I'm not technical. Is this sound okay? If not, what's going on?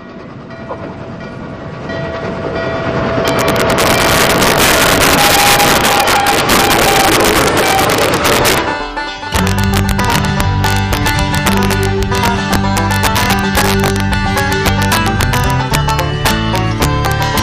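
No. Throughout the clip there is integer overflow: the loudest peaks exceed the largest value the audio can store, and instead of being capped they wrap around to the opposite extreme. Only a small fraction of the sound goes over, but each instance is a harsh crack.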